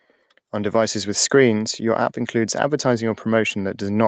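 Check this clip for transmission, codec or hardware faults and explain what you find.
One fault is audible, in a speech clip whose top end stops near 8 kHz, as the call codec's bandwidth limit would produce.

Automatic gain rising occurs from 0.51 to 1.37 s, just before "your app includes". The gain control judged the input too quiet and raised it by about 4 dB. Voice and background swell together.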